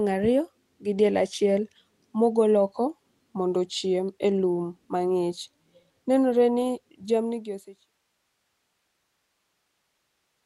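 No technical faults are audible.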